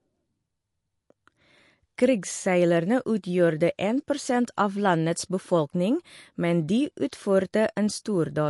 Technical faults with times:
0.00-8.50 MP3 compression

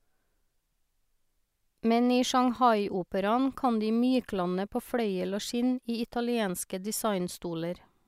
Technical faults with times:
none

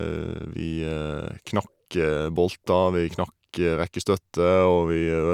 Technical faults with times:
none

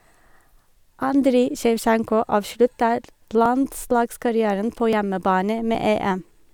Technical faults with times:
1.57 dropped buffer (overrun)
2.44 dropped buffer (overrun)
3.46 dropped buffer (overrun)
4.93 dropped buffer (overrun)
5.75 dropped buffer (overrun)

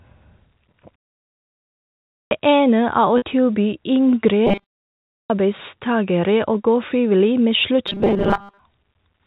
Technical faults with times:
2.18-2.31 clipped start after a pause
3.18-3.22 packet loss with pitch repetition
4.47-4.97 robotic sound from repeated short buffers
5.16-5.30 clipped start after a pause
7.88-8.59 robotic sound from repeated short buffers

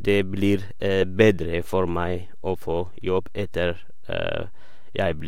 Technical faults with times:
0.00-5.28 DC offset

